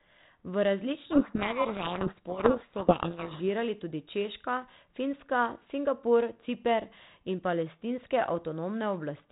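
From 1.06 to 3.46 s the speech is buried under harsh, grinding distortion, then clears abruptly. This is a codec payload misread: the G.726 code words arrive with their bit order reversed relative to what the decoder expects, so every sample difference is decoded from scrambled bits and the adaptive predictor is driven wildly off course. Once both ends agree on the packing again, the 32 kbit/s G.726 path returns to its light, band-limited telephone character.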